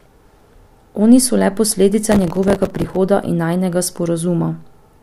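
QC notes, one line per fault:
2.12 to 2.96 s, processor overload crackle. The speech turns gritty and torn for most of a second. The processor kept missing buffer deadlines, dozens in a row. Each miss replayed a scrap of old audio with hard edges, which fits a buffer of a few milliseconds.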